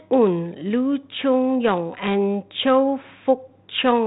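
No technical faults can be heard in this speech.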